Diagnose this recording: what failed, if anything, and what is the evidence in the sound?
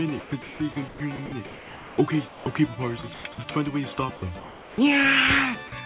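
Sound chopped by the voice detector, at 0.2–0.6 s, 0.88–1.98 s and 3.14–3.38 s. The sound flickers into flat synthetic noise. Likely cause: call processing, with sender-side gating.

Sound dropped by the voice detector, at 2.28–2.46 s and 4.16–4.22 s. Sound briefly gives way to steady noise. Likely cause: the sender's detector misjudging quiet sound as background.

Comfort noise in place of the background, 4.16–4.78 s. Detailed background becomes featureless hiss, band-limited to 4 kHz like the call path. Likely cause: discontinuous transmission in call processing.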